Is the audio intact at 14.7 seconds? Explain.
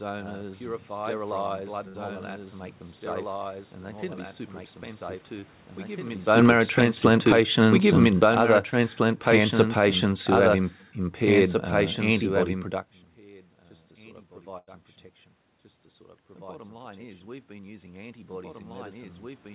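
No. Between 14.58 and 14.69 s, a burst of packet loss hits the speech: a run of call packets never arrived in time to be played. The receiver covered the hole by extending the last sound it had for about 91 ms and letting it fade, so a held, dying remnant of the preceding sound replaces the real audio. Speech then picks up again with about 100 ms of content skipped.

A doubled audio track also runs through this moment. A second full-band copy of the speech trails the original by about two seconds and sits a few decibels lower. That is likely a second capture arriving by a slower route and being mixed back in. It carries no reverberant tail or room colouring, so at 14.7 s the speech from roughly two seconds earlier sounds on top of the current speech, like a second dry talker.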